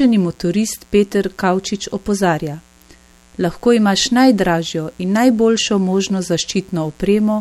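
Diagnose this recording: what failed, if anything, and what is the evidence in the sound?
Mains buzz runs through the whole speech clip, a steady, raspy buzz about 35 dB below the speech. It entered in the analogue wiring: a dimmer, rectifier or unshielded run admits sharp spikes twice per 60 Hz cycle, spreading harmonics up to several kHz.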